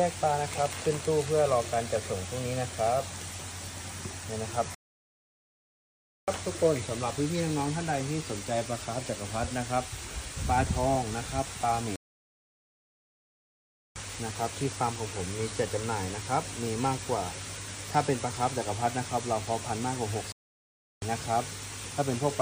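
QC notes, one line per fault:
4.75–6.28 s, 11.96–13.96 s and 20.32–21.02 s, playback stall: the audio drops abruptly to silence mid-flow for about 1.5 s, 2.0 s and 0.7 s, then resumes, likely because the player ran short of buffered data or its output thread was blocked.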